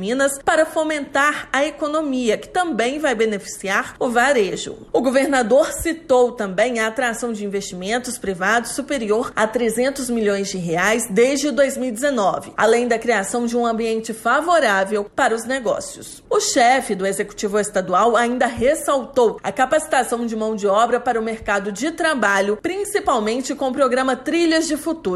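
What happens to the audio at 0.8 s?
Nothing goes wrong at 0.8 s; the audio plays through that moment intact, with no dropout, click, glitch or other technical fault.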